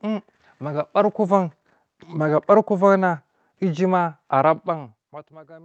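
Nothing here calls for comment; it's just a bit of speech with nothing going wrong in it.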